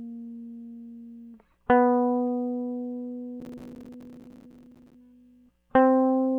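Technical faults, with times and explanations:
3.40 to 4.94 s, processor overload crackle: for about one and a half seconds the music breaks into a gritty, tearing crackle, then clears as the load eases. The processor keeps missing its deadlines to fill each small audio buffer, and every miss drops in a short hard-edged gap of silence. The length of the gaps points to buffers of roughly 5 ms, with something like a hundred missed across the stretch, close enough together to merge into continuous crackle.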